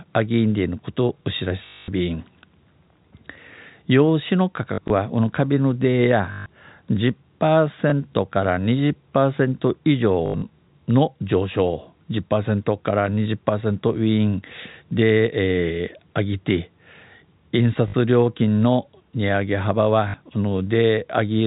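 Packet loss with the last packet repeated hits the speech at 1.66–1.88, 4.74–4.9, 6.32–6.46, 7.9–7.92, 10.26–10.42, 17.88–17.94 and 20.08–20.14 s. Missing audio is filled by replaying the previous packet. Longer runs stutter with a robotic buzz, which fits 20 ms packets.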